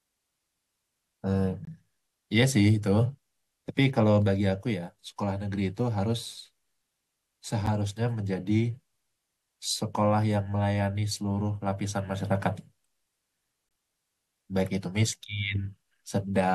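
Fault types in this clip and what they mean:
Gap between stream segments: three hard-edged dropouts of silence break the speech, at 1.65–1.67 s, 7.66 s and 13.69–13.71 s, lasting 22, 10 and 21 ms. Their six-second spacing suggests timestamp gaps at segment joins, padded with silence.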